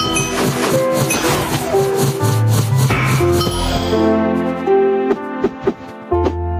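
The input gain was most likely set far too high for the microphone, leaving a fast limiter or compressor to pull the level down on every loud sound. Throughout the clip this produces gain pumping, with the level swinging by around 10 dB. Loud and quiet passages sit unnaturally close together, and the whole recording sounds squashed and breathing.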